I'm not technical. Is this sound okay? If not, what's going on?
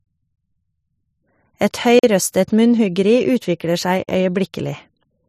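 No. There is a gap between chunks: the speech briefly stops for about 44 milliseconds at 1.99 and again at 4.04 seconds, about two seconds apart. Unlike a dropout, nothing is missing. The speech pauses at each join and then carries on.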